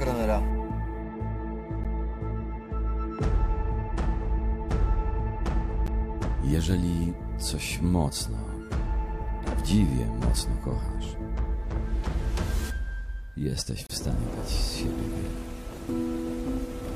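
Gaps between stream segments occur at 1.84 s, 5.87 s and from 13.87 to 13.90 s. Each time, two segments' timestamps fail to meet, and the player fills the hole with silence, leaving hard-edged dropouts of about 12, 13 and 30 ms. No audio is lost, and the spacing fits 4-second segments.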